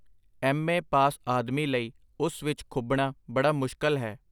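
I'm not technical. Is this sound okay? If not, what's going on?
Yes, nothing in this speech recording sounds faulty. There's no technical problem to worry about.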